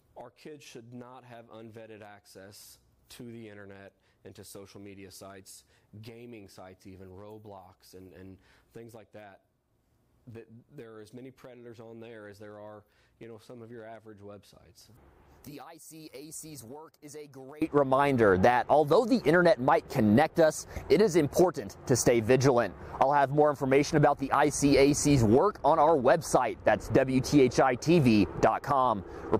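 From 0.0 to 17.6 s the mono sum drops by about 23 dB to a faint remnant, likely one channel inverted, cancelling everything shared between channels.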